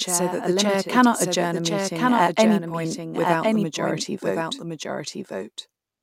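A doubled audio track runs throughout the speech: a second, full-band copy trails the original by about a second, roughly 5 dB quieter, with no decay or room colour. This most likely comes from a slower capture path recording the same signal twice.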